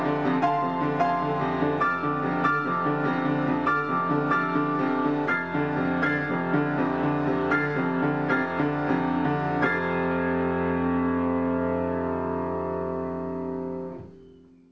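No technical faults can be heard anywhere in this audio.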